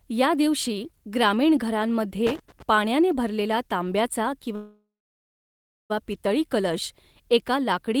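Loose connector crackle runs from 2.27 to 2.62 s, just before "पाण्याने भरलेला तांब्याचा". A worn or dirty contact keeps making and breaking as it shifts, chopping the speech into an irregular burst of scratchy crackle.

A call audio freeze follows from 4.55 to 5.92 s, between "पाण्याने भरलेला तांब्याचा" and "पितळी कलश एका लाकडी". The receiver stretches the last sound into a fading buzz that drops to silence for about 1.02 s of the 1.34 s gap. The speech then resumes where it stopped, with nothing lost and everything after it 1.34 s late. The likely cause is packets held up in transit so that the jitter buffer ran empty.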